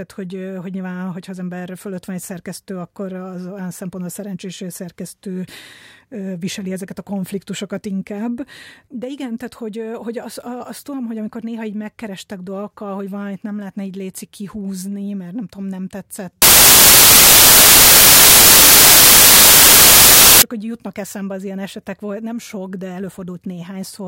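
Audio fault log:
16.42 to 20.42 s, samples built from the wrong bytes: after "mert nem tudom nem", the speech turns into loud, harsh broadband noise for four seconds. Each sample's bytes are combined wrongly, so the rapidly changing low bits dominate. It clears before "hogy jutnak eszembe az".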